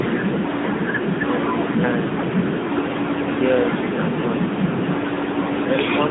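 From start to finish, the speech carries the AMR narrowband mobile codec. Everything sits in a line band of about 150 Hz to 3.7 kHz, so it sounds thin. The bitrate sounds like 10.2 kbps. Its vocal-tract model makes the speech plainly buzzy and synthetic.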